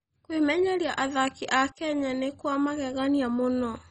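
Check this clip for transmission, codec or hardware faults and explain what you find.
One codec fault is present, throughout the speech. It sounds like heavy MP2 compression. Nothing reaches above about 10.3 kHz, so the sound is dull. It gurgles and turns granular as upper sub-bands drop in and out and starved bands are coarsely quantised. The damage fits a very low bitrate, around 32 kbps.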